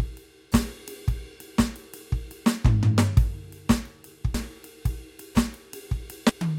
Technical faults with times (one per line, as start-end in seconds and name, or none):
4.34 damaged data in a compressed stream
6.29 damaged data in a compressed stream